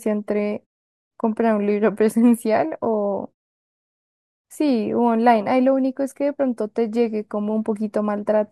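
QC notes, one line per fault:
No faults found in this speech recording.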